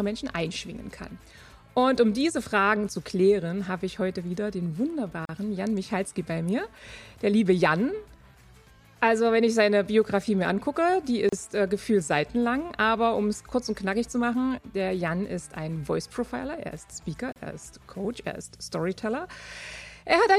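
Gaps at joins of encoded pieces fall at 5.25–5.29 s, 11.29–11.33 s and 17.33–17.36 s, every 6 s. Each separately encoded piece kept its encoder's leading delay and padded final frame, so a silence of about 35 ms opens with smeared edges before the sound resumes.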